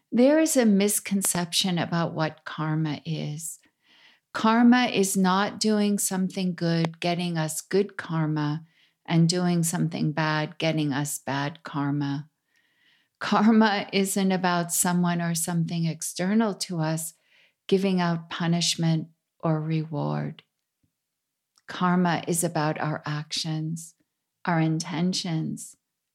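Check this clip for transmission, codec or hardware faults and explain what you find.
Three loud pops are present. Loud pop, 1.25 to 1.37 s and 6.85 to 6.87 s: a sudden voltage step or pulse, likely from a plug, switch, static discharge or driver glitch, is added on top of the signal, and the following circuitry shapes it into a brief burst. The first event is a double pop just before "about what karma is". The second is a single pop between "is not doing something" and "getting us good karma". Each peaks around 20 dB above the speech, which continues underneath.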